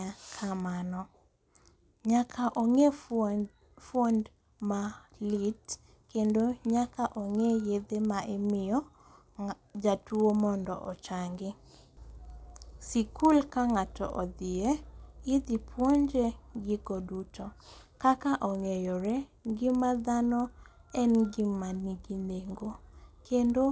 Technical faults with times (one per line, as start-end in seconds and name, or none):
0.00-23.72 resampler restarted on every block